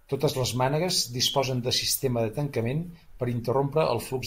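Nothing in this bit of speech stands out as a technical fault, so there's nothing here to flag.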